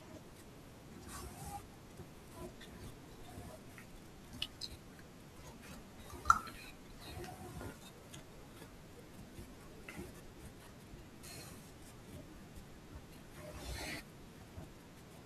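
A speech recording with a single wireless microphone noise hit, a brief burst of static from about 7.72 to 7.81 s. The analogue FM radio link fades for roughly 85 ms as multipath reflections cancel the carrier, so receiver noise rises.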